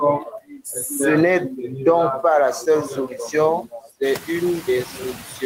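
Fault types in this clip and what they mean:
Noise suppressor artifacts: The suppressor treats anything steady as noise and turns those frequency bands down frame by frame, taking roughly 10 dB off the background across the whole clip. So the background sinks in the gaps and creeps back up underneath the speech. It stands out more once the room noise jumps about 13 dB around 4 s and then sits only about 13 dB below the speech.
Speech cut by the noise suppressor: Here the suppressor mistakes bits of the actual speech for noise and pulls them down along with the background, so they come across swallowed or faint. It happens twice. From 0.2 to 0.66 s it's the worst, dipping as much as about 19 dB over roughly 300 ms of sound. From 3.63 to 4.01 s it's milder, about 13 dB at most over around 150 ms.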